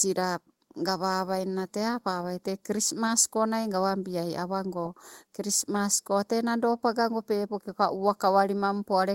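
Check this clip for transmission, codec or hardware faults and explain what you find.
Two faults are present: a constant channel delay, and two brief lost-packet repairs.

Channel delay (comb filtering), throughout: one channel lags by a fraction of a millisecond before mono summing, cancelling evenly spaced frequencies from around 3 kHz up, giving a hollow, phasey tone.

Lost packet rebuilt from error correction, at 3.07–3.09 s and 4.85–4.87 s (after "gawabiaii awago", before "krismas ko tee"): each 20 ms stretch, consistent with one lost packet, was filled from a low-bitrate in-band copy, so it sounds briefly rougher and noisier.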